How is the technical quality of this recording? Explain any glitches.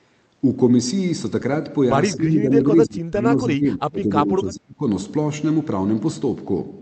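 The recording has one clear glitch. Speech suppressed in double talk, 2.17 to 4.84 s: the speech dips by up to about 25 dB, roughly two seconds in total, likely because the echo canceller mistook overlapping talk for echo.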